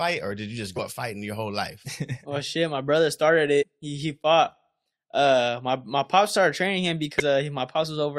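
Compressed frames were skipped three times in this speech clip. Whole coded frames went missing or were rejected by the decoder, so playback jumps ahead by roughly a tenth to a fifth of a second each time. The skips come at 0.76 to 0.80 s after "or did you just", at 3.61 to 3.64 s after "shit my brother started", and at 7.19 s after "my pop started training".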